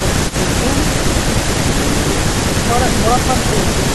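From 0.29 to 0.34 s, a brief echo leak: a faint copy of the speech, about 20 dB down, arrives 0.35 s late, likely left over because a far-end loudspeaker echo canceller did not remove it all.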